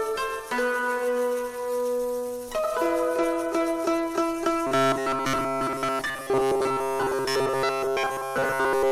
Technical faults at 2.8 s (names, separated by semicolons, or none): none